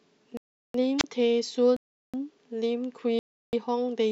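Blocks of digital silence cut into this speech recording from 0.37 to 0.74 s, from 1.77 to 2.14 s and from 3.19 to 3.53 s. Each time the sound drops straight to silence for about 0.37 s (the last for 0.34 s) and returns with no fade. The first two gaps are the same length, which fits a 16384-sample output buffer that the program failed to fill in time. A wireless microphone squelch dropout occurs from 0.98 to 1.04 s. A brief rise of hiss or static comes just before the receiver's squelch mutes the output for about 29 ms, and then the signal comes back. This is what happens when an analogue FM radio link fades below the level the receiver will pass.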